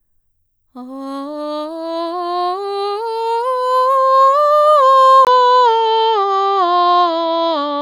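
At 5.25 s, after a 20 ms gap, the music goes dull, with nothing above 7.6 kHz and faint background noise added, likely an input switched to a poorer device.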